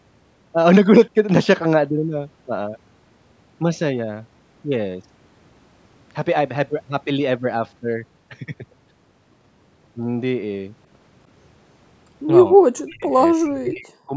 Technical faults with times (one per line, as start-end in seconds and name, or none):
12.54-12.63 speech suppressed in double talk
12.77-12.82 echo leak
12.89-14.16 speech suppressed in double talk